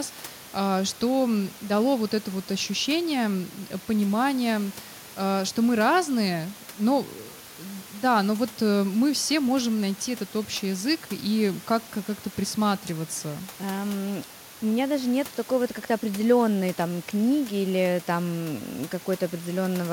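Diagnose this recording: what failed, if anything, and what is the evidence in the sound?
No failure found; room noise sits about 22 dB below speech.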